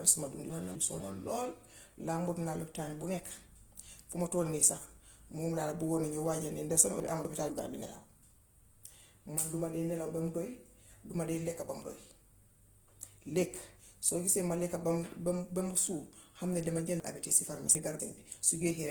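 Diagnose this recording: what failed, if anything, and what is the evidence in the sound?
Codec stage: a grainy, rough texture runs through the speech, with no MP3-style swirl. That points to likely Opus compression near 16 kbps, filling starved bands with noise.

Storage or network stage: chunks out of order at 0.5–1.0 s, 7.0–7.5 s and 17.0–18.0 s. Pieces of about 250 ms play late, heard as jumbled moments. Unlike dropouts, nothing is missing.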